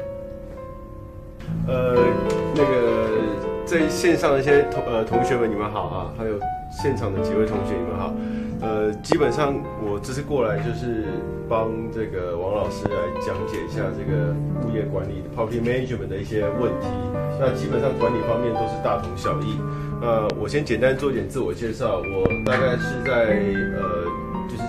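Sharp pops jump out at 9.12–9.14 s, 12.86–12.88 s and 20.30–20.32 s, with a quick double pop at 22.26–22.49 s, each around 20 dB above the audio, which continues beneath. These loud pops are likely voltage spikes from a plug, switch, static discharge or driver glitch.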